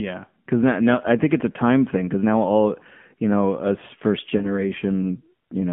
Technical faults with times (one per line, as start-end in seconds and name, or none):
0.00-5.72 AMR narrowband mobile codec
4.38-4.63 lost AMR speech frames